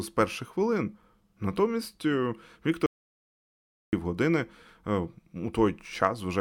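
At 2.86 s the speech cuts off abruptly and returns at 3.93 s, an audio dropout to silence about 1.07 s long with no room tone. The input was likely lost while recording continued, writing silence: a flat waveform line and an empty spectrogram column.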